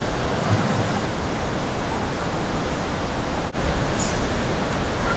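From 0 to 1.92 s and again from 2.69 s to the end, the speech drops by up to about 40 dB, the waveform flattening and the spectrogram nearly emptying. This is likely speech suppressed in double talk, an echo canceller muting its own talker.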